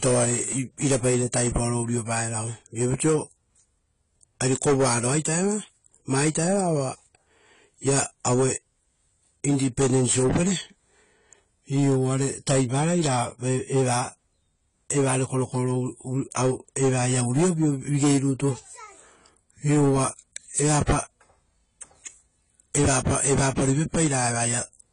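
Throughout the recording the speech carries plainly audible AAC compression damage, likely from AAC-LC at a low bitrate. Nothing is present above 10 kHz, so the top octave is simply missing and the sound is dull. The encoder has spent too few bits on each frame, leaving gaps in the spectrum that give sustained sounds a warbling, smeared texture and make sibilants fizzy. The damage fits a bitrate around 24 kbps.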